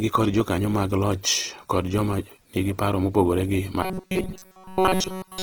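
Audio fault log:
throughout, Opus compression: speech sounds rough, grainy and noisy yet still reaches up to about 20 kHz, likely Opus in its music mode, which fits a bitrate near 16 kbps.
3.83 to 5.43 s, robotic sound from repeated short buffers: speech becomes a rigid, metallic buzz pitched at 188 Hz across the whole stretch, likely a roughly 5.3 ms buffer replayed in place of fresh audio.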